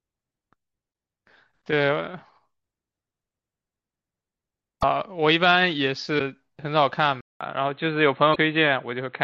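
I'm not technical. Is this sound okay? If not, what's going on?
No. There are short chirps or blips at 0.90–0.93, 4.79–4.84, 6.16–6.21 and 8.32–8.37 seconds. This is damaged data in a compressed stream: the player hits corrupted bits, loses its place and searches for the next frame.

At 7.21 seconds there's a brief silence, then the speech turns duller and boxier at the same loudness, with everything above 4.2 kHz gone and a faint new background noise. The likely cause is the input switched to a poorer device, such as another microphone or a headset.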